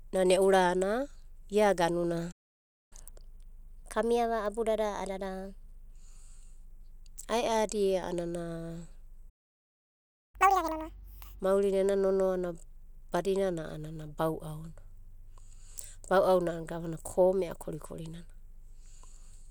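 Speech, with two playback stalls: silence from 2.31 to 2.93 s and from 9.29 to 10.35 s. The player likely ran short of data or was blocked. Each stall is followed by catch-up at higher speed. From 2.93 to 5.93 s the speech runs at 1.1 times speed, about a semitone and a half high. From 10.35 to 11.40 s it runs at double speed, around ten semitones high. Both stretches then return to normal speed and pitch.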